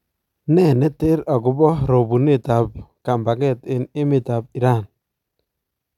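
No technical faults are audible anywhere in the speech.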